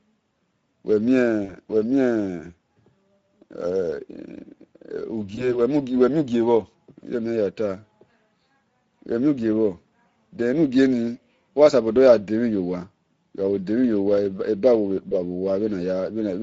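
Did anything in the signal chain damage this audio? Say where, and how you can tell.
Yes. The codec stage damaged the whole clip. The speech has a grainy, hoarse, plainly rasping texture from start to finish, which is the Speex codec starved of bits for its excitation signal. The damage fits a mid-rate Speex setting around 16.8 kbps. Unlike a transform codec such as MP3, there is no swirly or watery smearing. The harshness is tied to the voicing itself, as expected from a CELP coder rebuilding speech from a coarse pulse model.

The network stage adds three brief disturbances, each heard as VoIP packet loss concealed by the speech codec. They fall at about 1.45–1.56 s, 5.35–5.59 s and 15.09–15.15 s. Instead of cutting to silence, the sound briefly stretches and fades, and stays weak or distorted after the gap. The decoder is repeating its last pitch and filter with falling gain. The first gap suggests about 40 ms lost, two 20 ms frames, and the others a single frame each. 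Recovery outlasts the loss, most clearly at 5.35 s, where a 20 ms hole disturbs nearly a quarter second. A plain dropout would end sharply.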